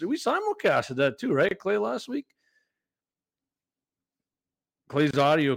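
At 1.49 to 1.51 s and again at 5.11 to 5.13 s the speech drops out for about 25 ms, then resumes exactly where it left off. Both are gaps at a join of encoded pieces: the audio was encoded in separate segments and concatenated without trimming, so each segment's encoder start-up delay and final-frame padding remain as silence. The edges are smeared by the codec, giving a brief hole in otherwise continuous sound.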